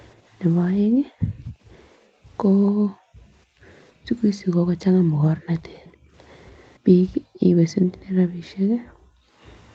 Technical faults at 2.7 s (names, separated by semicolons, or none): background gated by the echo canceller; echo leak